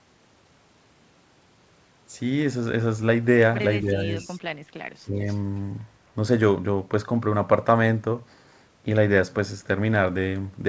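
At 3.81 s the speech dips for about 0.3 s, to 4.12 s. The drop is shallow, a few decibels. This is speech suppressed in double talk. It was likely caused by an echo canceller that could not tell the near talker from loudspeaker echo while both sides were active. So it turned the whole signal down.

At 4.2 s a faint echo leak follows, lasting to 4.28 s. A copy of the speech returns about 0.26 s late. It sits far below the main level, a brief scrap. A loudspeaker's echo canceller likely let part of its microphone pickup through, and it was sent back.

From 4.61 to 4.73 s the room sound drops out. This is background gated by the echo canceller. The canceller pulled the microphone down by about 11 dB while the loudspeaker played. The quiet gap lasts roughly a tenth of a second, then the background returns.

At 5.02 s the double-talk suppression returns, much harder, until 5.19 s. The speech falls by around 20 dB for about 150 ms. 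It nearly cuts out for that moment.

A second echo leak comes at 5.27 s, running to 5.38 s. It is delayed about 0.26 s again and is fainter still, about 30 dB below the speech. Throughout, nothing is heard above 8 kHz. That is the normal ceiling of a wideband call path and fits the G.722 codec.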